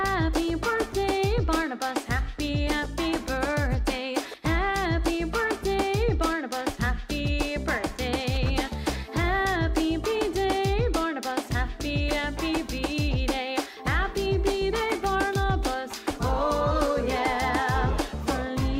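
There are no technical faults to describe at any point in the clip.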